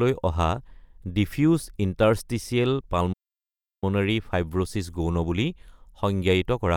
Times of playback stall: 3.12-3.84

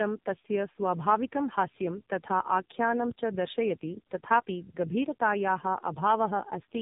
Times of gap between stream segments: none

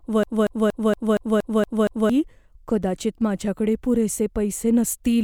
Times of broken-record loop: 0.00-2.10

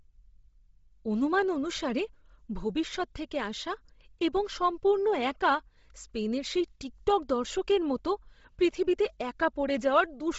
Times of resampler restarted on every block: none

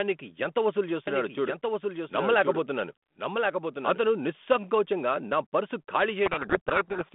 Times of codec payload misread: 6.26-7.14

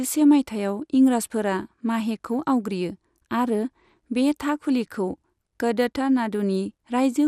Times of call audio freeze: none

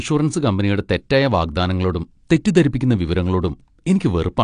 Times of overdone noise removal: none

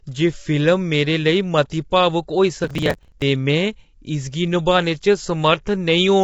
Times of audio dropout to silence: none

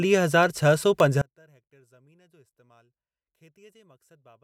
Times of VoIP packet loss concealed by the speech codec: none

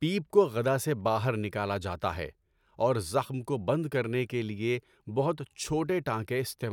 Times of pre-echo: none

